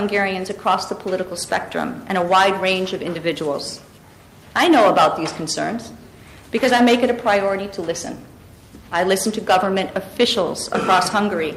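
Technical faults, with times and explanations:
Nothing technical stands out here; there's no fault to report anywhere in the clip.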